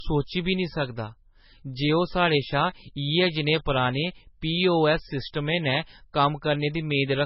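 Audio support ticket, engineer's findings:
Low-bitrate audio saved at a high bitrate, whole clip. Speech band ends at 5.6 kHz, with smeared coding artefacts throughout. Sound points to a low-bitrate MP3 source, likely around 16 kbit/s, re-encoded near 320 kbit/s. Larger file cannot restore the removed band or detail.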